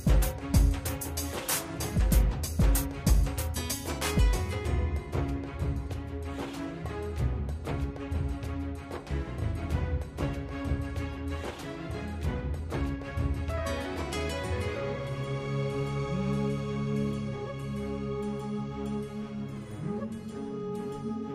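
Pre-emphasis left on from 0.0 to 3.99 s: the treble boost applied before recording was never undone on playback, a lift that fits the CD 50/15 µs curve. Highs sit about 8 dB above 1 kHz at 10 kHz, so the audio sounds thin, bright and sibilant.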